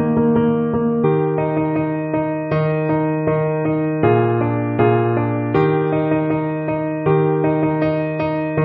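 At 1.03 s there is damaged data in the compressed stream: part of the file arrives wrong, so the decoder cannot read the frame there, loses sync and has to hunt for the next valid frame header. The result is a very brief blip, lasting well under 20 ms. Unlike a plain dropout, which is simply silence, this event comes from the decoder misreading damaged compressed data.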